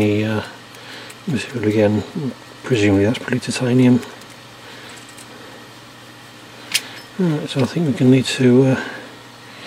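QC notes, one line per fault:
No fault found, so there is nothing to log against any time in this clip.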